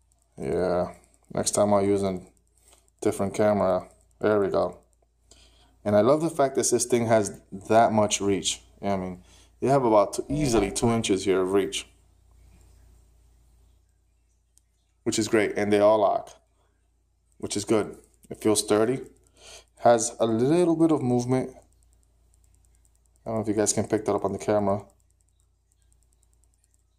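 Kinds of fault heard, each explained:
overlap-add ripple: Frames were rejoined with an overlap not summing to constant gain, so level swings about 11 dB around 300 Hz, a metallic buzz with extra tones around each note.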